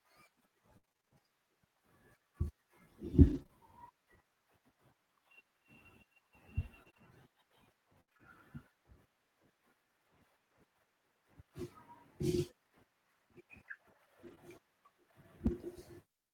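Repeated packet loss (robotic sound) runs through this speech from 0.77 to 3.51 s and again from 6.83 to 8.21 s. The first stretch has ten holes totalling about 240 ms, the longest 59 ms, so roughly 9% of that span is patched by stretching out the preceding sound. The second has seven holes totalling about 180 ms, the longest 67 ms, around 12% of the span. Because one hole follows another so quickly, the concealment never settles, and the voice turns choppy with fragments missing. Only a small share, a few tens of milliseconds in each stretch, comes back roughly rebuilt. A lost packet rebuilt from error correction appears at 14.23 to 14.33 s, covering about 60 ms, which fits three 20 ms packets. It appears again at 15.47 to 15.53 s, covering 40 ms, consistent with two packets. In both places the following packets carried low-bitrate duplicates of the missing ones, so the decoder plays those copies instead of leaving a gap. 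The sound stays continuous but briefly turns grainier and noisier. A short concealed packet loss sits at 14.35 to 14.39 s, just after that first rebuilt section. About 20 ms never arrived in time, and the receiver covered the hole by extending the last sound before fading back into the real signal, leaving a small smear or wobble.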